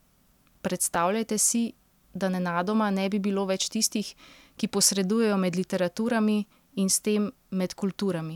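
A brief jumbled flicker appears at about 0.94 s in this speech. It comes from chunks out of order. One block of roughly 5.3 ms arrived a single chunk late and played after its successor, leaving abrupt joins where the order broke.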